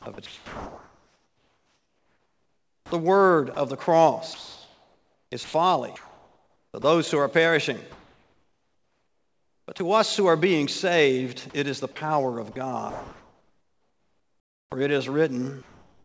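The audio comes through a call path that tops out around 8 kHz, consistent with a wideband call codec like G.722, and it's choppy in four stretches: 0.02 to 2.92 s, 4.34 to 6.84 s, 11.50 to 11.96 s and 12.52 to 14.72 s. In each one the sound keeps cutting in and out, with bits swapped for a flat synthetic hiss. That's sound chopped by the voice detector, likely the sender's detector toggling transmission on and off and the receiver filling the gaps with comfort noise. There are also two tiny dropouts, at 3.54 s and at 9.78 s, each about 20 ms, where the sound briefly gives way to steady noise. That's sound dropped by the voice detector, likely the detector mistaking a quiet moment for background and sending nothing for a frame. Then from 7.92 to 9.80 s, and again from 15.62 s to the end, the real background disappears and is replaced by a featureless, even noise. In the closing stretch this fill sits about 3 dB lower than the real background did, which itself was about 38 dB below the loud parts. 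That's comfort noise in place of the background, likely discontinuous transmission, where the sender goes quiet and the receiver synthesizes a rough stand-in for the room.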